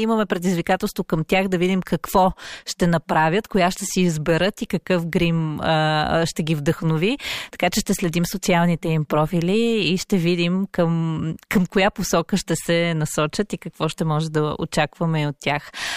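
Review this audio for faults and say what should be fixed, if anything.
Nothing to fix: no faults found in the speech recording, so no corrective action is needed.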